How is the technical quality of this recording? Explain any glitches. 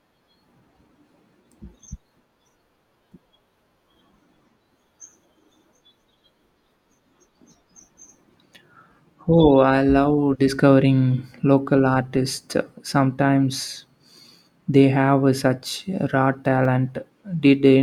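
Clock drift buffer slips run from 0.85 s to 16.65 s: about seven clicks in the speech, evenly spaced every 2.63 s. The likely cause is two devices running on separate clocks that disagree by something like 150 ppm. The buffer between them slowly fills or drains until a block of roughly 15 samples is dropped or repeated. Each slip is a brief tick whose metronomic regularity gives away its origin.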